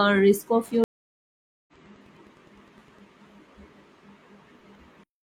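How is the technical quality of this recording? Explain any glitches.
The recording has two technical faults in the first three seconds of the clip: a steady interference tick and a dropout where the stream reconnects.

Wi-Fi interference, from 0.63 to 3.03 s. A nearby Wi-Fi radio's transmissions are being picked up and rectified by the audio circuitry. Its beacon repeats every 102.4 ms, so it sounds like a faint ticking about ten times a second, roughly 40 dB below the speech.

Stream reconnect, from 0.84 to 1.73 s. The connection dropped, and the player went silent for 837 ms before reconnecting with a fresh decoder. When the speech returns it has jumped ahead by roughly 0.7 s, so that stretch of speech is simply missing.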